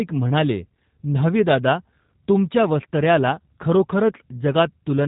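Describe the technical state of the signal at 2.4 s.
At 2.4 s, as throughout, G.729 codec damage: speech rebuilt from a filter and pulses sounds rough and synthetic, its spectrogram empty above 3.8 kHz.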